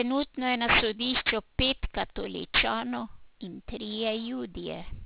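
Aliasing runs through the whole speech clip. Sibilants sound gritty and metallic, and the spectrum runs hard up to 4 kHz, which fits an unfiltered drop to 8 kHz. The folded energy is strong, nearly as loud as the speech.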